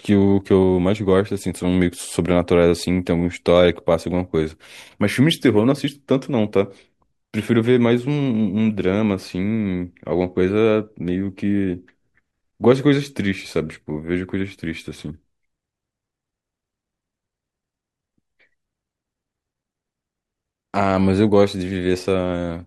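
No technical faults can be heard anywhere in the speech. Nothing calls for a time stamp or a cause.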